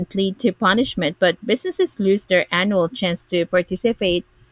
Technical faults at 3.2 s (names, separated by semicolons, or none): none